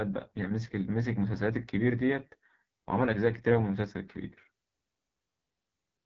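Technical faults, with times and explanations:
Throughout, AMR wideband (HD Voice) codec: speech sounds rough and raspy with nothing above 7.3 kHz, consistent with the lowest 6.6 kbit/s mode starving its vocal tract model.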